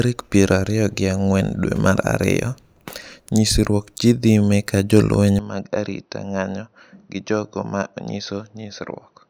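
Input switched to a poorer device at 5.39 s: from that moment to the end of the clip, the speech abruptly loses its top end, with nothing above about 6.2 kHz, so it turns duller and boxier. The level drops by roughly 10 dB, and a faint new background noise appears well below the speech. There is no gap at the change. The likely cause is the recording input moving to a different, narrower-band microphone or headset path.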